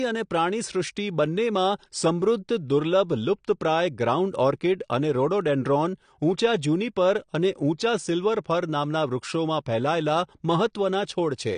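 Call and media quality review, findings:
AAC compression, whole clip: dull, smeared speech with a warbling, fizzy edge on sibilants and held vowels. Nothing above 9.8 kHz. Spectrogram: hard flat ceiling at 9.8 kHz, patchy holes and blotchy noise-filled bands below it. Likely cause: low-bitrate AAC-LC encode, consistent with about 32 kbps, with the encoder dropping bandwidth and coarsely quantising frames.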